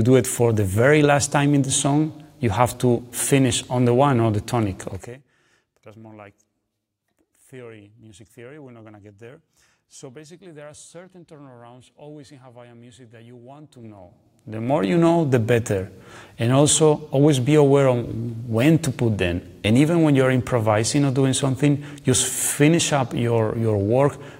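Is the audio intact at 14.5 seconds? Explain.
No. At 14.5 s the audio sits inside a stretch of zipper noise running from 13.76 to 14.98 s. A level change of roughly 25 dB is applied in unsmoothed 3 dB jumps, around seven per second, rather than as a continuous ramp. Each jump puts a small discontinuity into the waveform, so a regular ticking or zipping rides on top of the sound for as long as the level is moving.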